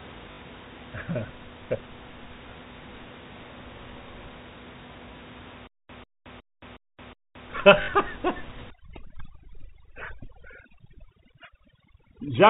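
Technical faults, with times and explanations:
0.32 to 0.38 s and 7.82 to 7.88 s, packet loss with last packet repeated: each time about 60 ms of audio goes missing and is filled by replaying the last received chunk, which fits three lost 20 ms packets. The short run buzzes at about 50 Hz, a brief robotic stutter. Unlike the stall below, there is no silence and no steady looping rhythm, just a tiny hiccup.
5.67 to 7.50 s, stutter with silent gaps: a 144 ms burst of sound plays five times at an even pace, one every 365 ms, with about 221 ms of dead digital silence after each. The likely cause is a stalled player or stream that replays its last fragment at each retry and then runs dry, and the audio due in that stretch is lost. The true silent gaps and the longer, regular loop set it apart from the buzzy packet repeats.
8.70 s to the end, overdone noise removal: from here the room noise, heard earlier at about 16 dB below the speech, is pushed down, leaving twinkling specks where single frequency bands flicker on and off. 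Quieter parts of the speech are cut along with it. This differs from the fixed telephone bandwidth of the G.711 coding, whose ceiling at 4 kHz stays the same across the clip, while this shifts from moment to moment.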